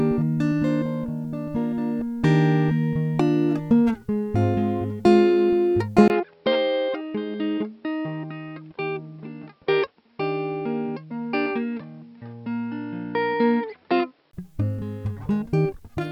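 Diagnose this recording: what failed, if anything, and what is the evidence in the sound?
Driver stage: from 6.08 to 14.33 s, after a 20 ms gap, the music loses everything above 5.5 kHz, drops about 5 dB and gains faint hiss. This is likely an input switched to a poorer device; a codec low-pass adds no new noise.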